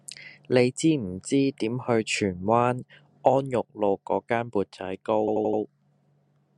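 At 5.27 s the speech starts to stutter with repeated frames. The same short slice of about 85 ms plays again and again until 5.61 s, which fits a small run of compressed frames being sent or written more than once. Nothing is lost, so the clip runs about 341 ms longer. A dropout, by contrast, leaves a gap or skips ahead.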